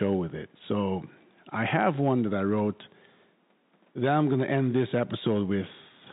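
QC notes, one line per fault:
No faults heard.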